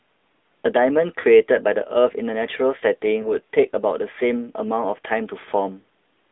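Throughout, the speech passes through the AMR narrowband mobile codec. It is confined to roughly 250 Hz to 3.6 kHz and carries a plainly audible buzzy, synthetic edge, which fits a mid-rate mode near 10.2 kbps. That coded texture, not mere filtering, separates it from a simple telephone band-limit.

From 1.20 to 1.25 s, lost AMR speech frames make the decoder stretch the previous pitch and vocal-tract settings at falling gain, which fits two missing 20 ms frames. The result is a smeared, fading warble rather than the hard silent gap of a dropout. A shorter single-frame loss at 3.22 to 3.28 s gives a brief dip and waver.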